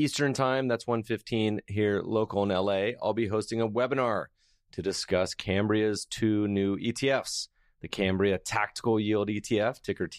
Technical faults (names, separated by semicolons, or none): dropped samples